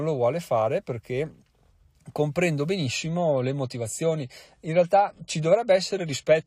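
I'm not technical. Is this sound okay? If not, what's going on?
No. From 2.86 s to the end there is an adaptive stream at a lower bitrate: the connection slowed, so the player switched to a lower-quality copy of the speech without stopping. The change is sudden and leaves no gap. With less data to describe the sound, the encoder discards more detail, so compression artefacts increase and the crisp high end vanishes, with nothing heard above about 14.1 kHz.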